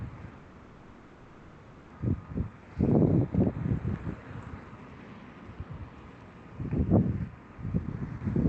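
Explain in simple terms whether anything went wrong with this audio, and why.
Two things go wrong, one near the start and one at the very end.

From 0.37 to 1.92 s there is a call audio freeze. For about a second and a half the sound stops moving forward, and the last bit of it is stretched into a fading buzz or hiss instead of new material. The likely cause is that the data carrying the audio got held up in transit, so the receiver ran out of sound to play and filled the wait. When the data arrived, playback picked up exactly where it had stopped. Unlike a dropout, nothing is skipped; a 1.53 s pause is simply inserted, and it never falls fully silent.

From 7.79 to 8.45 s there is a jitter buffer speed-up. The receiver had built up more audio than it wanted and caught up by snipping out many tiny slices, roughly a tenth of a second in total. The sound plays about 13% faster and feels rushed. 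What tells this apart from a tape-style speed change is that the pitch stays the same; only the timing tightens.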